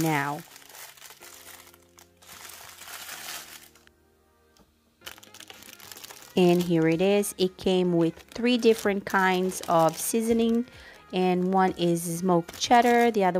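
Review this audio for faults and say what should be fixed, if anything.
No faults turn up in this audio, so nothing needs to be fixed.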